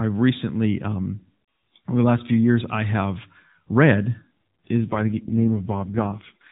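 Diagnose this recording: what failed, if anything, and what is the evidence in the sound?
An AMR rate drop at the network stage: from 4.79 s the link forced the codec into a lower mode, spending bits on error protection. The speech turns buzzier and more synthetic, with no gap or band change, which fits a fall from 12.2 to 4.75 kbps.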